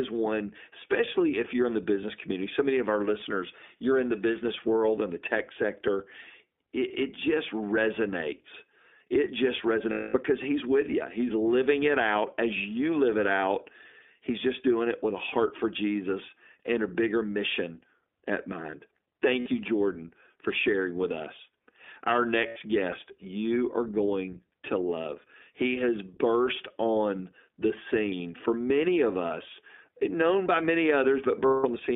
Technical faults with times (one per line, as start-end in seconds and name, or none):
0.00-31.96 iLBC codec
9.91-10.15 lost iLBC frames
19.40-19.49 lost iLBC frames
22.48-22.58 lost iLBC frames
31.46-31.66 lost iLBC frames